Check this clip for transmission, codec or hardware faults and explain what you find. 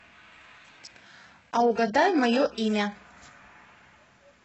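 There's one fault here: an adaptive stream starting at a low bitrate. From the start to about 2.95 s the speech is thin and smeared, with the top end either gone or replaced by a hissy, synthetic shimmer. That points to something like an 8 kbit/s HE-AAC rendition. The player opened on a cheap stream to start fast, then jumped up once it had sized up the connection. At 2.95 s the sound snaps to full clarity with no gap, which fits roughly 96 kbit/s AAC-LC.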